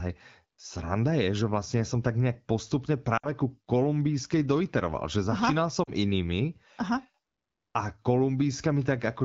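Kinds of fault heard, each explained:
Lost AMR speech frames: the decoder repeats its last frame with falling gain, so the voice briefly smears and fades rather than cutting to silence.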